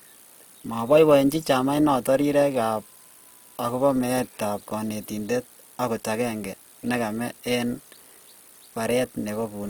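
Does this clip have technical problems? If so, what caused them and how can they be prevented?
Yes. Throughout the clip the speech has most likely been through Opus compression in its music (CELT) mode at a low bitrate, with a rate around 24 kbps fitting what is heard. Short of bits, the encoder keeps each band's energy but fills the detail with folded or noise-like content. The result is plainly audible: the speech turns grainy, rough and noisy rather than swirly, though the bandwidth stays full, reaching about 20.4 kHz. To prevent it, encode speech at a higher Opus bitrate or keep an uncompressed master.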